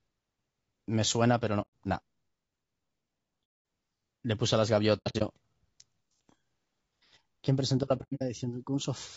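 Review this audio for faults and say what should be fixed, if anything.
Low-delay AAC compression throughout: the speech sounds rough and grainy, with noise between harmonics and a dulled top band. This is likely from AAC-ELD at about 32 kbps, whose short frames resolve pitch poorly.

AAC frame loss with muting at 1.61–1.68 s, 3.44–3.65 s, 4.97–5.22 s and 7.97–8.22 s: the decoder zeroes the missing frames, leaving soft-faded holes. The last two holes are broken into scattered gaps of up to about a tenth of a second.

To prevent both, raise the AAC-ELD bitrate and protect the stream against packet loss with redundancy or retransmission, plus concealment in place of muting.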